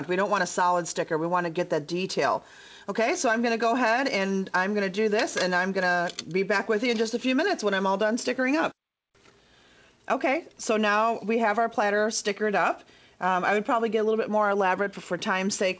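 There are no technical faults to describe at any point in time in this audio.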